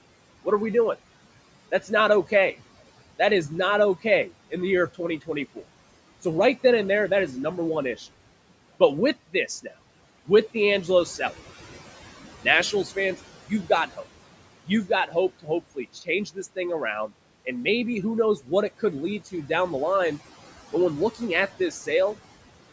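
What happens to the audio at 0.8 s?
At 0.8 s the audio carries noise suppressor artifacts, which run through the whole clip. The suppressor estimates the steady room noise and pulls down each frequency band it judges to be noise, frame by frame, by about 17 dB. The background therefore drops away in gaps and swells back under the speech, in band-limited call audio that is empty above 8 kHz.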